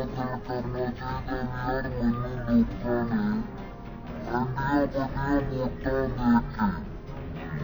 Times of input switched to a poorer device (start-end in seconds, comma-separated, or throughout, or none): none